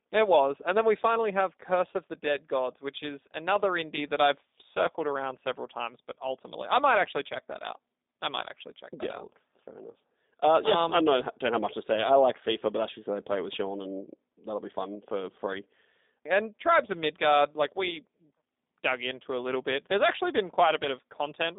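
Speech runs through a G.729 codec for the whole clip: nothing passes above 3.7 kHz or below about 200 Hz, and the voice sounds plainly rough and synthetic, which fits an 8 kbit/s model-based coder. Plain telephone band-limiting would sound muffled but clean, without that buzzy roughness.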